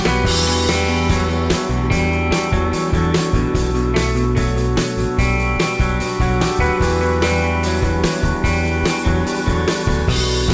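No technical faults are audible.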